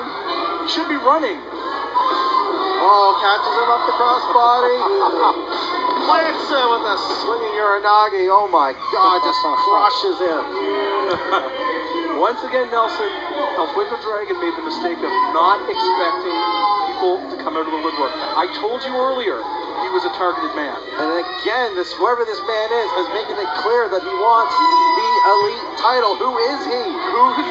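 At 1.99 and 18.23 s there are two short lost LE Audio frames dropouts, each about 20 ms, which fits two 10 ms frames. The LC3 decoder refills the gap by reusing the last spectrum with scrambled signs, so you hear a brief noisy smear rather than silence.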